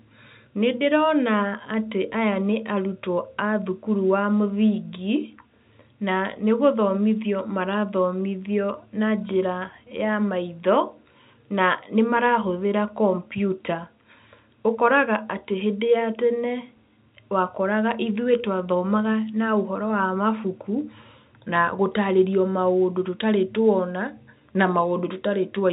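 Speech recording with no technical faults to report.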